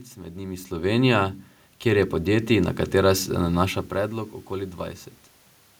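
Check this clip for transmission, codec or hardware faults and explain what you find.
One fault stands out, and it's on the processing side: an automatic gain rise from 1.83 to 3.23 s, just before "se nanaša". The automatic gain control decided the input was too quiet and ramped its gain up by about 5 dB over roughly 1.4 seconds. Because it scales everything it receives, the speech and the room noise swell together, which tells it apart from the talker shifting position near the mic around 0.5 and 3.5 s, where only the voice level changes.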